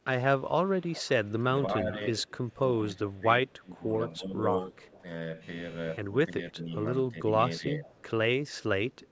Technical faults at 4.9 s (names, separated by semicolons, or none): echo leak